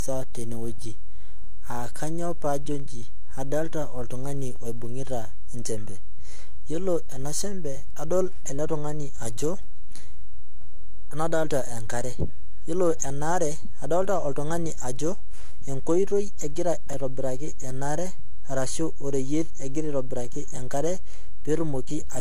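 Right through the speech, the waveform sits off centre with a DC offset. You won't hear it as such, but the whole signal is shifted away from zero by a constant, eating into headroom and leaving a steady lump of energy at the very bottom of the spectrum.

Also running the whole way is a swirly, hollow, smeared quality, with consonant attacks blurred and nothing at all above 14.2 kHz. That's more damage than one pass at a modest rate would leave, so it's likely generation loss: repeated lossy encoding, consistent with AAC-LC at around 64 kbit/s done a few times over, each pass requantising on a shifted frame grid and stacking up noise and spectral holes.

From 16.90 to 16.94 s there's a brief garbled jumble: chunks out of order. A short slice, sounding like a 10 ms piece landing about three pieces late, plays after audio that should follow it, so nothing's lost but the order is wrong across the hard joins. 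The same thing happens again from 20.56 to 20.59 s, right after "orashu oreyiet egira aitobiraki", with the late piece displaced by roughly two.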